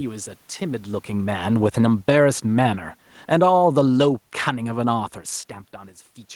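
Between 0.61 s and 5.1 s the automatic gain falls. Having judged the input too loud, or its background noise too strong, the control eases its gain down by about 9 dB. Speech and room noise sink together, so the waveform envelope tapers and the spectrogram's background band darkens along with the voice.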